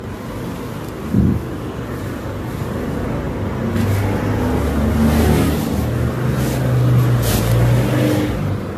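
The clip is everyday sound, and both faults run through all of it. There is channel delay (doubling): one channel arrives 40 ms late, and the two are summed to mono. Each event therefore repeats as a close slap at equal level, thickening every onset. The audio also sounds swirly, smeared and hollow, with blurred attacks and nothing above 14 kHz. This is likely generation loss, with the sound decoded and re-encoded around seven times through AAC-LC at a rate that fits 64 kbit/s. Each pass adds fresh noise and spectral holes.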